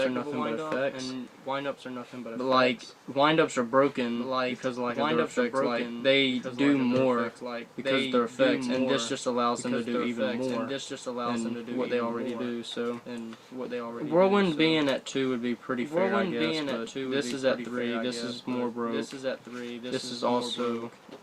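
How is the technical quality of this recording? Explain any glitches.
The recording has one clear fault, a doubled audio track, present throughout. A second full-band copy of the sound runs about two seconds behind the original. It sits roughly 5 dB quieter. It has no decay and no room colour, so it reads as a clean repeat rather than an echo. The cause is likely the same signal being captured twice, once through a slower path. The two copies overlap.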